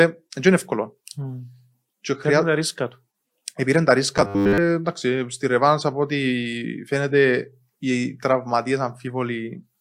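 A speech clip with one fault: robotic sound from repeated short buffers between 4.18 and 4.58 s. Over that stretch the speech collapses into a rigid, metallic buzz at a fixed 100 Hz that only loosely tracks the words. A 100 Hz buzz means a 10 ms chunk is being looped, which fits a 10 ms buffer. The likely cause is audio arriving too slowly, so the playback side repeats the last chunk to fill the gaps, and most of the real audio in that window is skipped.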